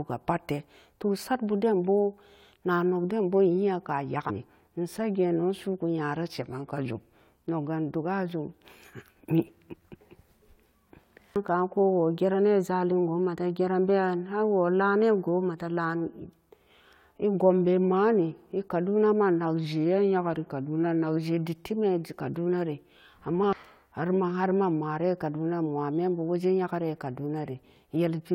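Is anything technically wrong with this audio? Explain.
Yes. Damaged data in a compressed stream at 4.29 to 4.31 s: corrupted frames make the decoder lose sync and hunt for the next header, producing a brief glitch. A drift correction step, likely from clock-matching software changing the playback rate in one step, causes the speech to slow by 5.5% and drop nearly a semitone (about 98 cents) from 6.34 to 7.43 s and again from 19.65 to 21.17 s, before snapping back.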